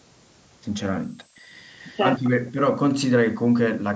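Speech, with a switching supply whistle throughout: a high tone wandering between about 7.6 and 9.4 kHz, about 20 dB below the speech, from a power supply running in audible burst mode or beating with another one. Background gated by the echo canceller from 1.06 to 1.46 s: room sound drops by about 40 dB while the far-end loudspeaker plays, then returns when the canceller releases. Echo leak from 1.76 to 2.02 s and 2.18 to 2.30 s: a faint copy trails the speech by 250 ms, about 30 dB and then about 20 dB down, likely residue the far end's canceller failed to remove. Speech suppressed in double talk from 2.29 to 2.44 s: the voice dips by about 40 dB, likely because the canceller mistook overlapping talk for echo.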